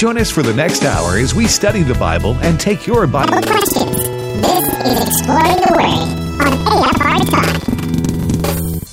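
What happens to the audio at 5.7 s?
At 5.7 s you're in the middle of a planar-read-as-interleaved stretch that runs from 3.24 s to the end. Each block of roughly 85 ms, which fits a 4096-sample block, plays twice at double speed, so it sounds an octave up with a flutter at about 11.7 Hz.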